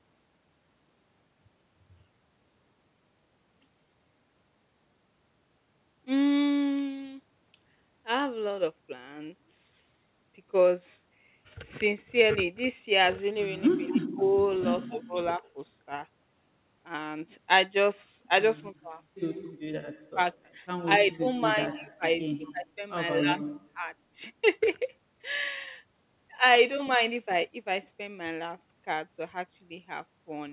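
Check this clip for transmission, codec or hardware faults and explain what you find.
Two faults appear in the speech, around 14 to 24 s. The band stops at 4 kHz, consistent with G.711 mu-law narrowband coding.

Echo leak, 13.87 to 13.95 s: a faint copy trailing by 228 ms, about 25 dB below the talker, likely from an incompletely cancelled loudspeaker pickup.

Speech suppressed in double talk, at 13.92–14.24, 14.88–15.41, 18.61–18.98, 20.13–20.19 and 21.0–23.9 s: the talker dips by roughly 15 to 30 dB, likely because the echo canceller attenuates overlapping speech.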